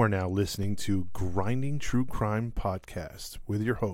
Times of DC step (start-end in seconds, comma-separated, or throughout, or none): 0.63-2.17